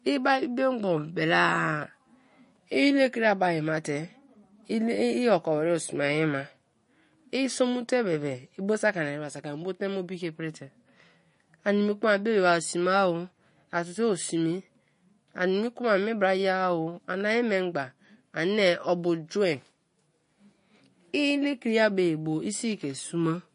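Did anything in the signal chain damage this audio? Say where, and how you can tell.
Yes, at the codec: the treble stops dead at 10.6 kHz throughout, with a watery swirl on the speech, likely MP3 compression at a low bitrate around 40 kbps.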